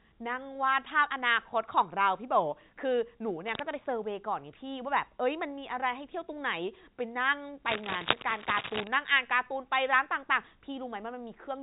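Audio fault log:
3.45–3.61 s and 7.66–8.88 s, cable scratch noise: a worn cable or connector being moved likely made its contact resistance jump erratically, adding dense, ragged noise bursts. The result is a brief rustle a little under the speech, then over a second of scratching about as loud as the speech.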